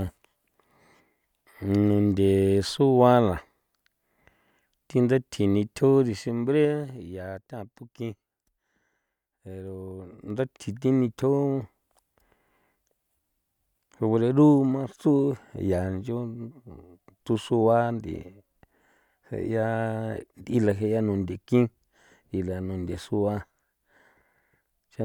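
Zipper noise appears from 6.0 to 7.0 s, just before "ya tatukin", as the level drops by about 10 dB in unsmoothed 2 dB steps, about five per second. Each jump puts a small click into the waveform, giving a slow ticking under the sound. At 10.08 to 10.56 s, before "thi nithjo", the level climbs about 10 dB in the same 2 dB steps at roughly ten per second, producing a faster zipping texture.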